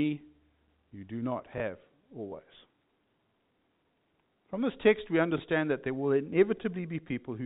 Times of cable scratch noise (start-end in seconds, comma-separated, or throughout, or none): none